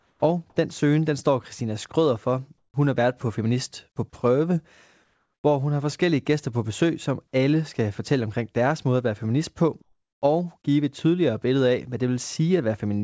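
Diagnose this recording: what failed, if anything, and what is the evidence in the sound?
Call processing: comfort noise in place of the background at 0–0.22 s, 2.58–2.74 s and 9.82–10.22 s, likely from discontinuous transmission. The spectrogram shows flat, textureless noise about 4 to 9 dB quieter.

Call processing: onset clipped by the voice detector at 0.2 s, just before "og den søgen den". About 20 ms is missing, likely from a slow detector. The waveform starts abruptly, without its soft beginning.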